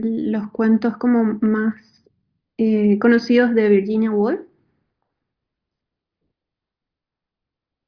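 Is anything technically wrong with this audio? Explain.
No, nothing technically wrong can be heard here.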